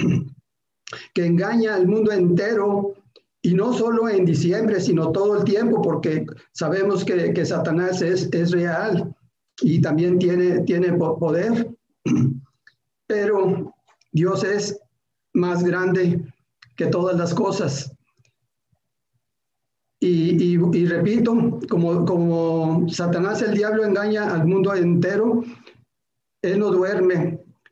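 Nothing in the audio stands out as a technical problem; it just runs along without anything going wrong that a listener would notice.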